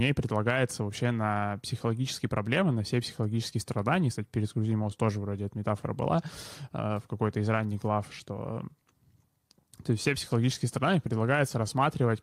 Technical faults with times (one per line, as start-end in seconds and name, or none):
none